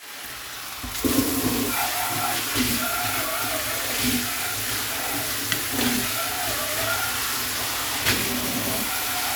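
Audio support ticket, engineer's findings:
Periodic USB or driver dropouts: bus or audio driver stalled every 0.5 s from 0.28 to 9.27 s, about twenty times. Each stall skips roughly half a millisecond of audio outright. Heard as evenly spaced ticks, audible only under signal.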